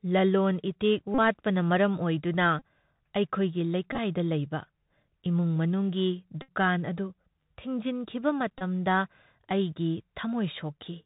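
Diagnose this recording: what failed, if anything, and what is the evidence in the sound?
The codec stage failed: the speech is carried through a Bluetooth CVSD headset codec, and the damage is plainly audible across the whole clip. Nothing above 4 kHz survives, so the sound is narrow and boxy. Sibilants come out scratchy, loud bright peaks smear where the one-bit delta modulator's step size can't keep up, and a granular hiss sits under everything. This fits a 64 kbps CVSD stream.

On top of that, the radio link shows Bluetooth headset packet repeats, where the headset replays the previous voice packet in place of lost ones. Each run adds a buzz near 267 Hz, the 3.75 ms packet rate. Buzzes occur at 1.14 to 1.19 s (about 37.5 ms lost), 2.59 to 2.62 s (22.5 ms), and 6.42 to 6.49 s (63.8 ms, the longest). At 8.58 to 8.63 s, 22.5 ms are lost. At 3.93 to 3.98 s, 37.5 ms are scattered over 52.5 ms, with runs of roughly 20 ms at most.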